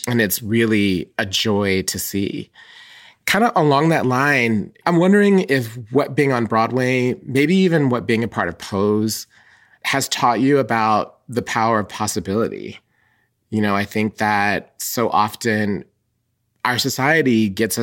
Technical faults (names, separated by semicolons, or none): none